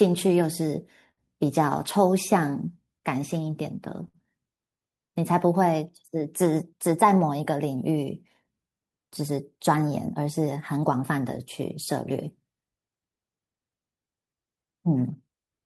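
Short stalls from a late packet occur in this speech at 1.11 to 1.20 s and again at 4.08 to 4.17 s. Each time, the next packet hadn't arrived when due, so the jitter buffer ran dry and the receiver stretched the last sound, about 60 ms and 58 ms, until it came. Playback then resumed where it left off, with nothing lost, but the held sound drags slightly and everything afterwards sits that much later.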